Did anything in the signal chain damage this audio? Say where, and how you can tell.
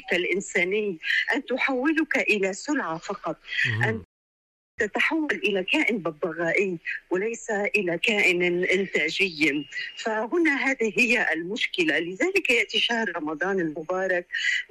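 Yes. A rebuffering stall at 4.04 s cuts the sound to silence until 4.78 s, adding about 0.74 s to the running time. This is a playback-stage fault fed by network delivery. The player drained its store of downloaded audio, halted, and waited for more data. The tell is that the audio picks up exactly where it stopped, with nothing skipped or repeated. The gap adds time but removes no material.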